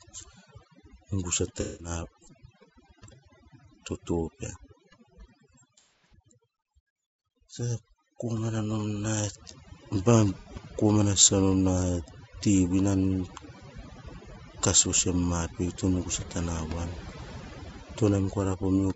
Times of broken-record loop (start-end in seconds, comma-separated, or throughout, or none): none